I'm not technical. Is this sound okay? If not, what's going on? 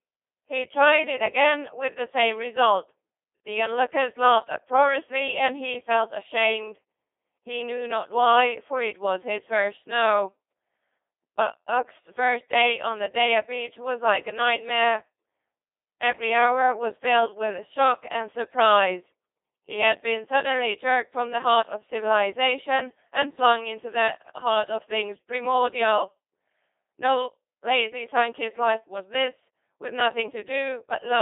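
No. The speech went through a Codec 2 vocoder, a digital-radio system that sends only a rough outline of the voice and rebuilds it from tones. From start to finish it sounds robotic and buzzy, with everything above about 3.7 kHz gone and heavy damage.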